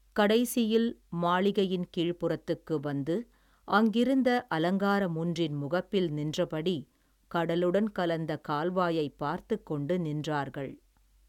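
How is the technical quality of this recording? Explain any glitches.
Nothing in the recording stood out as a technical problem on listening, so there are no glitches to explain.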